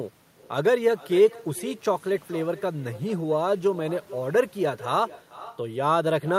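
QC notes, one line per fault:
throughout: echo with no canceller. Every phrase of the speech returns roughly 0.4 s later as a fainter, thinner copy sitting about 19 dB below the direct voice. The far end played the call over a loudspeaker, its microphone caught it, and nothing subtracted it before sending it back. On a waveform, each syllable burst has a small delayed twin trailing it. On a spectrogram, every speech band is repeated about 0.4 s later as a faint, band-limited ghost.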